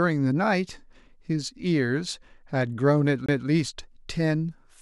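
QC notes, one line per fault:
3.26–3.29 s, CD skip: a momentary mute of about 20 ms, after which the speech resumes from a different point rather than where it left off. The laser has jumped to another turn of the disc's spiral, dropping continuity abruptly.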